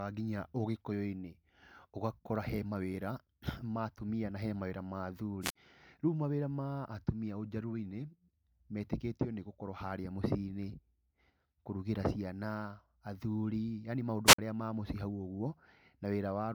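Wireless microphone squelch dropouts at 5.41 to 5.56 s, after "mawĩra ma", and 14.26 to 14.39 s. Fading radio signal brings hiss, then a 53 ms squelch mute.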